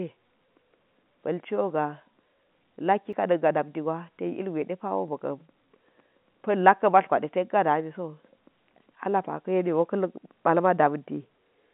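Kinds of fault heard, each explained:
Block of digital silence: at 3.13 s a 5 ms run of samples is replaced by zeros, so the speech cuts straight to digital silence and back with no fade, and the two abrupt edges fuse into one short tick within the telephone-band sound.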